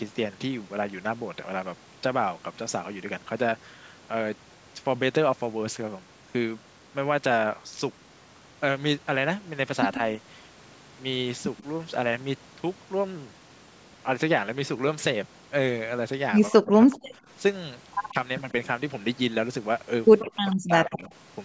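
At 9.94–9.98 s and 11.57–11.63 s, faint echo leak appears: short scraps of the talker's sound returning 136 ms late, about 20 and 30 dB below the speech. The likely cause is a loudspeaker echo canceller letting residue through. On a spectrogram these show as weak, time-shifted copies of the preceding harmonics.

From 16.5 to 17.12 s, speech suppressed in double talk cuts the level in patches totalling around 0.4 s, dipping by roughly 40 dB. This is likely an echo canceller clamping down while both sides talk. The waveform shows abrupt notches and the spectrogram shows columns gone dark. The speech above is band-limited to 8 kHz.

Further echo scraps follow at 17.04–17.08 s (about 40 dB down) and 18.09–18.13 s (about 30 dB down). A brief suppression of roughly 10 dB occurs at 18.10–18.16 s. A longer echo runs from 20.19 to 20.56 s, about 20 dB down, and hands straight into a deep suppression from 20.55 to 21.10 s.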